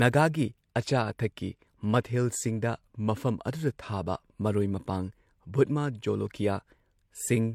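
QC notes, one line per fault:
throughout: transcoding between lossy codecs. Two different artefact textures stack on the speech, unlike a single codec, likely MP3 followed by HE-AAC. Nothing above 20.4 kHz.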